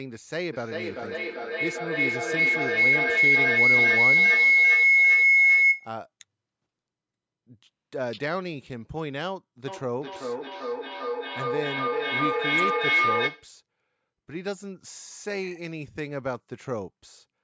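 From 0.53 to 6.01 s a feedback howl takes over. Two devices in the same room share the call, and the sound circling from loudspeaker to microphone returns louder on each pass. Rather than fading, it narrows to a whistling tone around 2 kHz that swells to about 12 dB above the speech, with the loop coming round roughly every 0.4 s. The sustained pitched tone that keeps growing, instead of recognisable repeats of the speech, is what marks it as howl rather than echo.

From 9.68 to 13.57 s there is feedback echo between two devices. One device plays back what the other's microphone sent, that microphone catches it again, and neither echo canceller removes the other device's output. The speech comes back about every 0.4 s, each copy thinner and more ringing, stacking up to about 7 dB above the direct speech. Here the repeats are still audible as speech, not collapsed into one steady tone. Throughout, the call's microphone processing limits the audio to nothing above 8 kHz.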